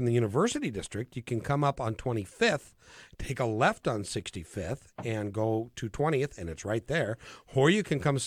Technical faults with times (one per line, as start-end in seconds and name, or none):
none